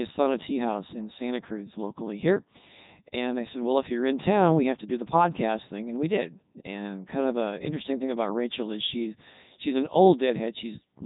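Codec 2 vocoder damage runs from start to finish. Only pitch, voicing, energy and a rough spectral envelope survive, and the decoder rebuilds the speech from sine waves, so it turns robotic and buzzy, with nothing above 3.8 kHz. This fits Codec 2's top 3.2 kbit/s mode.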